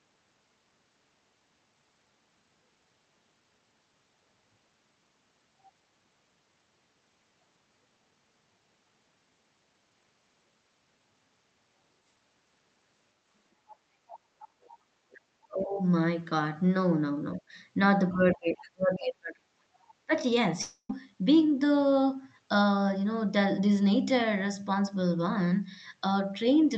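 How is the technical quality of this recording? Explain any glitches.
The recording has three kinds of fault, all clustered between about 13.7 s and 20.9 s.

Other side's voice leaking through: faint second-voice fragments appear at 13.70–13.76 s, 14.08–14.76 s, 15.11–15.18 s and 18.61–18.70 s. They sit about 25 dB below the main speech, and the 15.11 s fragment is about 30 dB below. The likely cause is residual acoustic echo. The far end plays over a loudspeaker, and the echo canceller fails to fully subtract it from the microphone, so scraps of the other talker get through.

Speech suppressed in double talk: the main voice is pushed down at 15.48–15.79 s, 17.39–17.56 s and 18.12–20.12 s. The drops reach about 25 dB in the first two and about 35 dB in the third, where roughly 1.5 s of the two-second span is affected. Both parties were likely talking at once, so the echo suppressor could not separate near speech from echo and attenuated everything. 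The result is dips and broken-up stretches of the talker's voice.

Long network dropout: from 20.61 to 20.91 s, about 0.28 s of audio never arrived. The receiver fills that gap with a continuation of the last sound that decays as a buzzy, hissy tail, followed by a brief silence of about 80 ms. Speech then resumes mid-stream without the lost portion. This is the likely signature of packet loss concealment covering a burst loss in the network.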